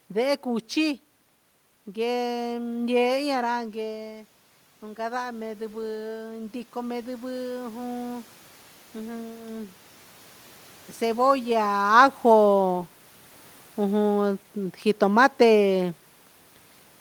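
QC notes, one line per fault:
3.55–8.33 s, automatic gain rising: just after "io ra" the talker moves back from the microphone around 3.5 s and the input drops by about 9 dB, so the automatic gain control sees a quiet signal and raises its gain by about 8 dB. It does this slowly, over nearly five seconds, so the voice climbs back toward its earlier level while the room noise swells up with it, giving a gradual lift in the background rather than a clean recovery.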